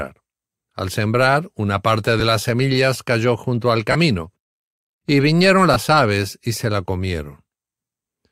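Three short dropouts in this speech sound like lost LE Audio frames. At 2.20 s, after "sembrar una parte", there's a 10 ms blip. Around 3.92–3.95 s, after "semillas cayó junto al", a 30 ms gap fits three 10 ms frames. At 5.74–5.76 s, between "y vinieron" and "aves y se la", there's a 20 ms gap. Each time the LC3 decoder patched the hole by repeating the last spectrum with scrambled phase, so the voice turns briefly into a rough, noisy smear.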